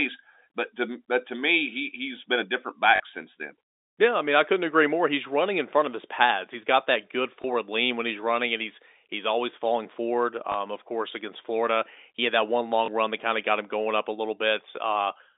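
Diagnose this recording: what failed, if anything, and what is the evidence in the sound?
Network stage: packet loss with last packet repeated. The receiver replayed the previous packet over four gaps: 40 ms at 2.96 s, a short stutter, and single blips of 20 ms at 7.42 s (after "got that good"), 10.52 s and 12.86 s. This fits 20 ms packets on a G.711 telephone line.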